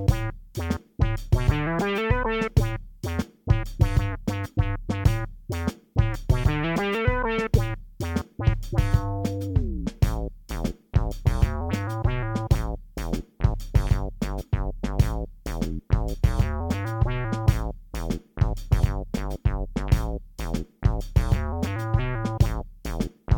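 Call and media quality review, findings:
Compressed frames skipped, 18.79–18.81 s: audio jumps ahead around 50 ms, fitting about two 23.2 ms frames lost or rejected at decoder.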